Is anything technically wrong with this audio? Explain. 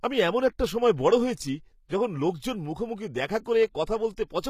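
Yes. The speech carries HE-AAC compression damage throughout. This is likely low-bitrate, around 20 kbps. Rebuilt treble misaligns with the lower harmonics, making s sounds gritty and metallic, with nothing above 14.9 kHz.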